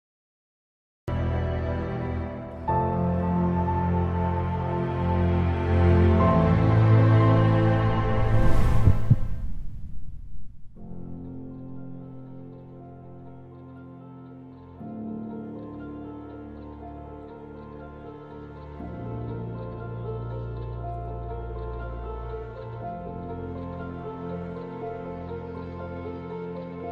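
A cut-off start occurs at 1.08 s: the first 1.08 s are digital silence, and the sound then begins abruptly partway through, with no natural attack or fade-in. Capture or streaming evidently began late, so the opening of the sound was never recorded.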